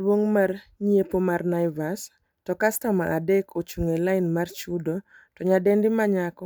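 No technical faults can be heard in this recording. The speech runs on without a break, and nothing in the sound points to a problem in how it was captured or carried.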